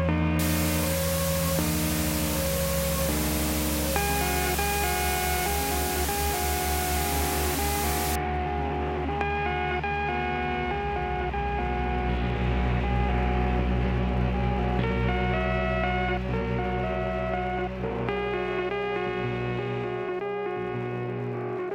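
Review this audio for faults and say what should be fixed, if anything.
Low bit depth with dither runs from 0.39 s to 8.16 s: a steady, even hiss sits under the sound, nearly as loud as the signal itself, with no grit or distortion. The hiss is consistent with a 4-bit signal: dither added before rounding turns the coarse rounding error into flat white noise. On a spectrogram this shows as a uniform wash across all frequencies; on the waveform, a thick constant noise floor that ends abruptly at 8.16 s. To prevent it, keep processing and export at 16 or 24 bits and reduce bit depth only at the final stage, if at all.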